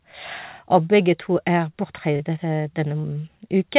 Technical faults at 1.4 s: none

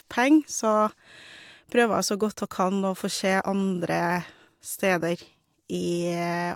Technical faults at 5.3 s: none

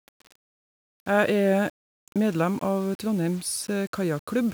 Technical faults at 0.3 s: low bit depth without dither

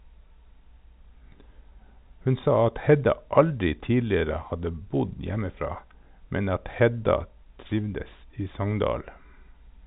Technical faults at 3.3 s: none

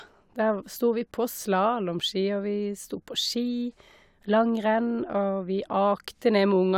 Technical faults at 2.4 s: none

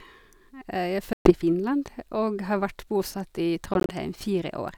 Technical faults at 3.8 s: Bluetooth dropout

